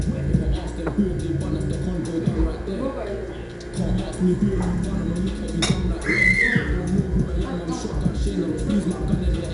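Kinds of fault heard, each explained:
4-bit ADPCM compression, throughout: coarse 4-bit steps from a predicted value leave plainly audible gritty hiss that tracks loudness, and nothing above 10.6 kHz remains.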